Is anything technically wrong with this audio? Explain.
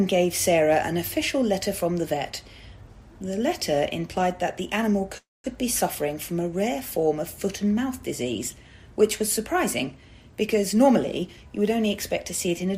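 Yes, two faults are audible.

At 5.17 to 5.46 s there is a call audio freeze, likely from packets held up while the jitter buffer ran dry. The last sound is stretched as a fading buzz or hiss, then 200 ms of silence. The audio resumes 267 ms later than before, with nothing lost.

From 10.64 s to the end there is a jitter buffer speed-up. The receiver trims an excess backlog by cutting out short pitch-period pieces, around 150 ms in total. Playback runs at 106% speed with unchanged pitch and sounds hurried.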